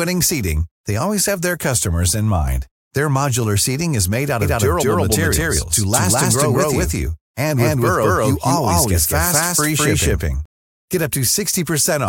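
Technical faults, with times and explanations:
4.42–10.46 s, doubled audio track: right after "seating is made out", an equally loud full-band copy runs about a fifth of a second behind. It starts and stops abruptly, likely from a second, slower capture path, and every onset shows twice in the waveform and spectrogram.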